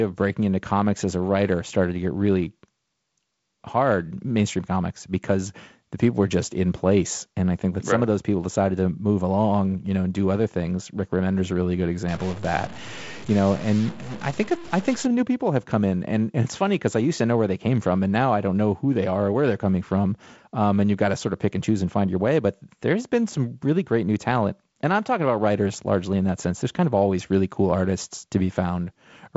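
Speech clip, carried over G.722 wideband telephone coding at 48 kbit/s, with nothing above about 7.7 kHz. From 12.08 to 15.06 s, between "a really good" and "new people have come", distortion sits on the speech, and the short gaps fill with steady noise instead of going quiet. That noise in the pauses is what sets a stuck bit apart from clipping, which only distorts loud peaks. The likely cause is one data bit held at a fixed value by a broken line or converter, which throws about half the samples off by that bit's weight.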